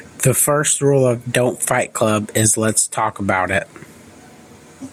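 A speech recording with gain pumping throughout. The level swings by about 15 dB. The likely cause is excessive mic gain hitting a fast limiter, which squashes loud and soft parts together.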